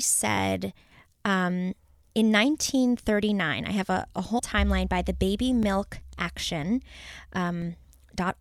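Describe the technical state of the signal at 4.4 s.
Compressed frames skipped at 4.38 s: a couple of whole frames never reached the output, so the speech jumps ahead by about 50 ms, which fits a 26.1 ms frame length. The overlapping neighbour frames smear the join into a brief blip rather than a sharp click.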